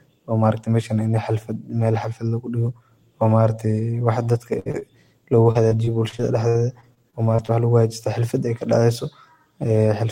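At 4.59 to 4.67 s a burst of packet loss removes about 60 ms of speech. The receiver extends the preceding sound and fades it across the hole, so a voiced sound becomes a brief held buzz and anything else a fading hiss, before the speech resumes with that stretch missing.

Two short concealed packet losses follow, at 4.71 to 4.75 s and 4.79 to 4.83 s, each losing roughly 20 ms. The decoder patches each hole by extrapolating the last waveform, then cross-fades back, leaving small smears or wobbles in the speech.

From 5.51 to 7.50 s, ending just before "waxa luguhagajista xalfad ey", repeated packet loss (robotic sound) produces about a dozen dropouts, the longest 60 ms, concealing around 15% of the span. Each fill repeats the previous sound, so the speech turns choppy, with fragments gone.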